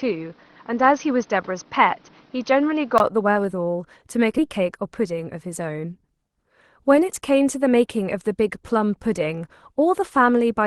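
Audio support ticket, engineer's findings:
Input switched to a poorer device, 0.00–3.00 s: band-limited, nothing above 6.3 kHz, new noise floor about 30 dB down, level unchanged; 20 ms silence at 3.00 s. Likely mic or headset-profile change.

Skip ahead at 4.38 s: abrupt forward jump, about 0.3 s of speech lost, no gap or fill. Packets dropped while later audio was already queued.

Jitter buffer speed-up, 4.49–5.93 s: speech at 107% rate, pitch unchanged, hurried. Receiver trimmed pitch periods, roughly 100 ms total, to shrink buffer delay.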